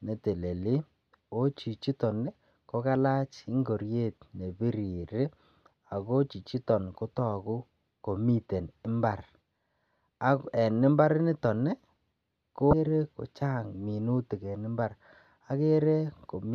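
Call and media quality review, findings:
Damaged data in a compressed stream, 6.30–6.33 s: short blip, about 34 ms. Probable component is the decoder input. Bad or missing bytes in a frame, so the decoder misreads it, loses sync and hunts for the next frame header.

Same thing again at 12.70–12.73 s: identical 34 ms glitch, same decoder resync. Worth checking the transport or storage path for corruption, since it's hit twice.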